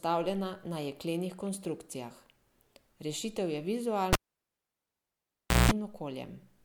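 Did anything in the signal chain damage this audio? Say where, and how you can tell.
Yes, in the analogue wiring. At 4.13 s the speech breaks with a pop and drops to near silence for about 1.54 s. A roughly 187 ms burst of 60 Hz mains buzz comes near the end of that gap, then a second pop as the signal returns at 5.71 s. This is a cable pulled and plugged in while live. The disconnect pops and kills the signal, the plug tip alone picks up hum before full contact, and reseating it pops again.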